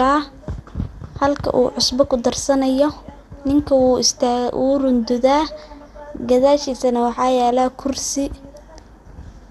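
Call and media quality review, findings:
MP2 compression, throughout the speech. Dull top with no content above 12.1 kHz. Plainly audible gurgling, granular distortion. Upper sub-bands starved of bits and switched off, remaining bands coarsely quantised. Likely a low-rate Layer II encode, consistent with roughly 80 kbps.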